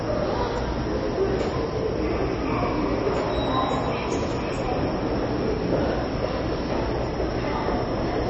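MP3 compression runs through the whole clip, from start to finish. The audio has nothing above 8 kHz, so the top end sounds dull and closed in, and the coding damage is plainly audible as a watery, swirly texture. This is likely the work of an MP3 encoder starved of bits, in a way that fits a bitrate around 30 kbps: it cuts the treble at a fixed point and drops weaker frequency components that flicker in and out between frames.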